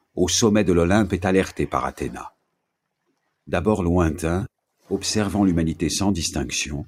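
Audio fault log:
No faults heard.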